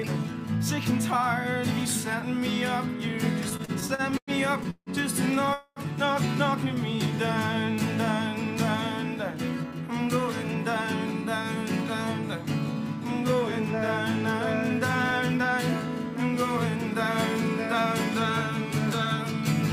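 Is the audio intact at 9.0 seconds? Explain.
Yes, at 9.0 seconds the audio runs on cleanly, with no dropout, click, distortion or other fault to be heard.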